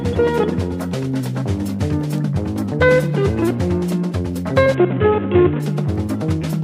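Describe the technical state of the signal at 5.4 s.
A Bluetooth SBC bit pool drop runs from 4.74 to 5.6 s. The link's encoder starved its bit allocation, which points to a bit pool falling to single figures near 54 kbps: the upper sub-bands get few or no bits, leaving dulled treble and gritty quantisation noise.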